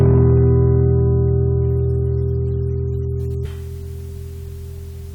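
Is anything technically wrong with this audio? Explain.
Yes. From 0.01 to 0.99 s there is hard clipping: the sound is driven about 5 dB past full scale, so its peaks are flattened, adding a crackling edge.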